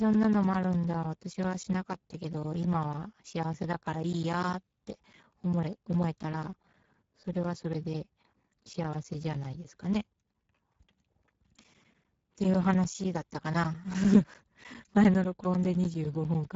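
Throughout, the speech carries Speex codec damage: a hoarse, noisy quality from the starved excitation, with nothing above 7.7 kHz. The top band sounds like shaped noise rather than detail, which fits a low Speex setting near 10 kbps.

From 0.13 s to 16.45 s, periodic USB or driver dropouts cut roughly ten milliseconds of audio to silence every 0.1 s. A blocked bus or driver loses samples at a fixed interval, producing a steady train of ticks audible wherever signal is present.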